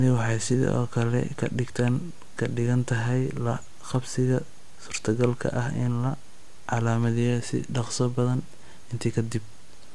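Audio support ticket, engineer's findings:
No faults found in recording.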